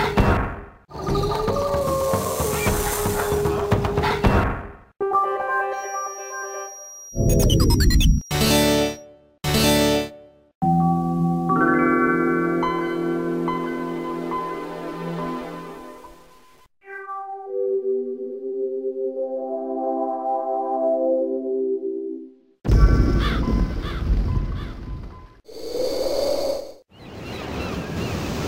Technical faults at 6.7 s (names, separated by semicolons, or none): feedback whistle